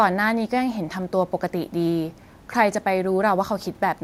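No technical faults are audible.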